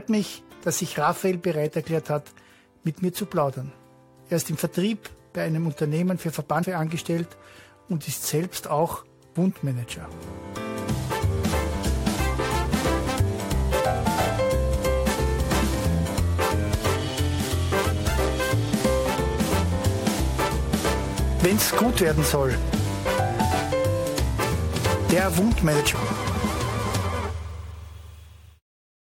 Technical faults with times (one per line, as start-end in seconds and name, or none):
6.62-6.64 damaged data in a compressed stream
11.52 damaged data in a compressed stream
25.94 damaged data in a compressed stream